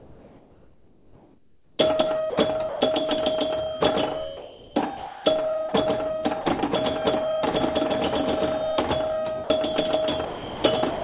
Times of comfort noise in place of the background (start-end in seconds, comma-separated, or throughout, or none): 0.00-1.79